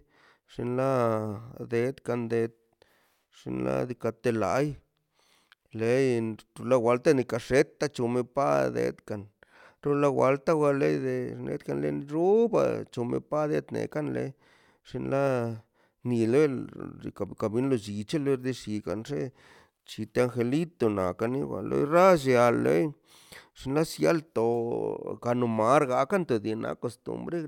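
No technical faults can be heard at any point in the speech. There is nothing to place on a timeline and nothing to trace back to a cause.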